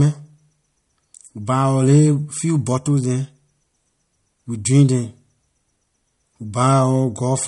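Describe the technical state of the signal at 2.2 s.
At 2.2 s the speech carries damage that runs through the whole clip and is likely from MP3 compression, with a strain on bits that fits a rate of roughly 46 kbps. Short of bits, the encoder removes everything above 11.2 kHz and drops weak frequency lines that then flicker on and off between frames. The damage is plainly audible: the top end is dull and the sound takes on a watery, swirling quality.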